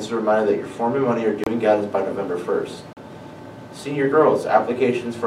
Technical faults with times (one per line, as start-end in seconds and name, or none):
1.44-1.47 Bluetooth stall
2.93-2.97 Bluetooth stall